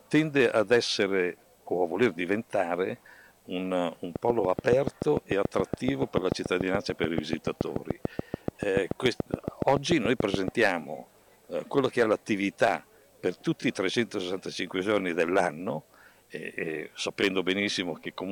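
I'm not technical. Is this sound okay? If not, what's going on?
No. From about 4.16 to 10.49 seconds there's a steady ticking laid over the audio, roughly seven sharp pops every second, evenly spaced, around fifty in all. They stand out loudly and carry on through the quieter gaps too. This is a train of clicks: a short burst of electrical noise repeating at a fixed rhythm, most likely interference from nearby equipment or a faulty connection or power supply.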